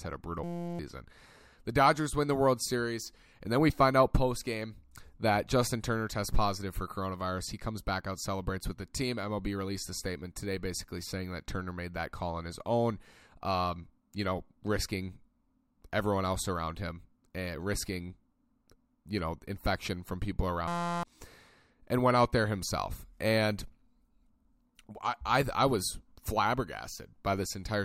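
Speech, with two system hang loops: the driver stalled while the hardware kept replaying one 5.8 ms slice, which fits a 256-sample buffer. This gives a steady 172 Hz buzz at 0.44–0.79 s after "had a brutal" and at 20.68–21.03 s after "know infection from people", each losing roughly 0.4 s of audio.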